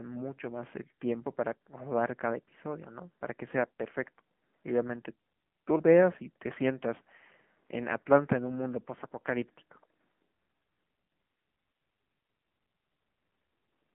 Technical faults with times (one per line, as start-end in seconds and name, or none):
0.00-13.94 AMR narrowband mobile codec